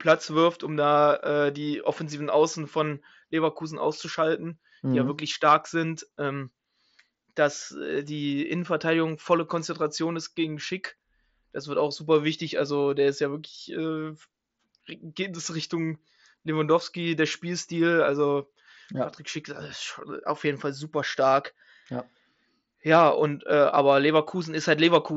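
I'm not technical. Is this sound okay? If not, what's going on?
Yes, this speech recording is technically sound, with nothing going wrong in the signal; it comes through an ordinary Bluetooth headset connection, which keeps the voice clear but leaves out the very highest treble, and that is normal for this kind of link.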